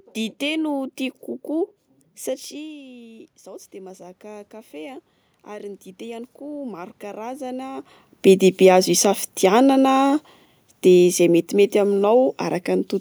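The automatic gain control raised its gain gradually by about 13 dB from 2.49 s to 7.9 s. It was responding to an input that fell about 17 dB when the talker moved away. Voice and room noise swell together until "bedebe azo isafidianana".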